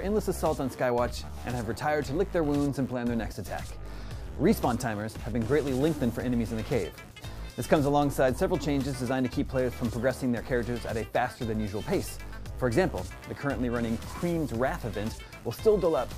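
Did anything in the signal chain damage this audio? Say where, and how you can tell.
No, nothing along the chain has left an audible mark on this audio, and the signal holds steady and intact throughout.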